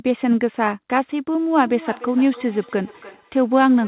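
From 1.60 s to the end, speech returns thin and ringing about every third of a second, about 19 dB down: feedback echo between two devices.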